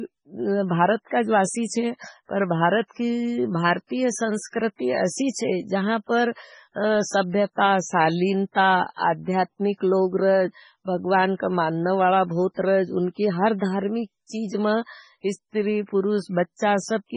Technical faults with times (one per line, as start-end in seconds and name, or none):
0.00-17.16 MP3 compression